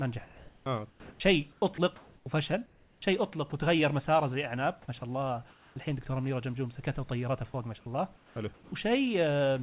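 From 0.24 to 3.52 s the speech is chopped by the voice detector, likely from a sender flipping between sending and pausing. Roughly a second and a half of quiet syllable edges get swapped for comfort noise, so the sound stutters.

At 5.0 s there's a tiny dropout, sound the detector likely mistook for background, and then from 5.0 to 5.76 s comfort noise stands in for the background. The real room noise, sitting about 35 dB under the speech, turns into flat, featureless hiss that likely comes from the receiver's synthetic fill.

Another brief drop lands at 7.52 s. From 8.16 to 8.72 s the background goes synthetic again, and from 8.54 to 8.72 s the detector likely drops a bit of speech, which gives way to comfort noise. All of this sits on narrowband audio, with nothing above 4 kHz.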